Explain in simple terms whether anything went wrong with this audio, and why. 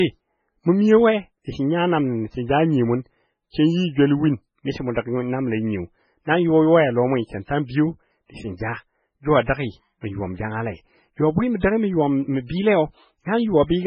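Two problems are audible.

Throughout the recording the speech has a thin, watery quality, and everything above about 8.5 kHz is missing, so the crisp top end of consonants is dull. The likely cause is heavy MP3 compression. To save space, the encoder removed the treble entirely and dropped quieter frequency detail that it judged unimportant. That detail flickers in and out from moment to moment, which produces the swirling texture.

Between 7.45 and 7.49 s there is pre-echo: a brief hiss of about 37 ms just before a sharp sound begins, and the sound's onset is softened. The codec works in short blocks and spreads its noise evenly across each block. Here a sudden loud moment fell late in a block, so noise meant to hide under the loud part spilled into the quiet instant before it.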